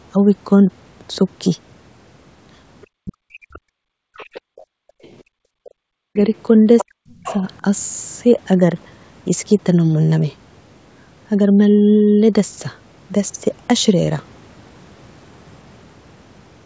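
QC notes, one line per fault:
2.95–3.74 s, 5.73–6.17 s and 6.84–7.62 s: speech suppressed in double talk. The talker's speech dips by roughly 40 dB or breaks up in pieces, for under a second each time, while the far-end voice is playing on the loudspeaker. The likely cause is the echo canceller failing to separate near-end speech from loudspeaker echo and attenuating both.
4.02–5.45 s: background gated by the echo canceller. The room tone drops sharply, by about 37 dB at the deepest, for around a second in total, then returns. The canceller clamped the microphone hard while the loudspeaker was active and released it afterwards.
4.14–7.35 s: other side's voice leaking through. A second voice is audible under the talker, roughly 15 dB below the near-end speech. This is likely loudspeaker playback of the far end reaching the microphone and surviving incomplete echo cancellation.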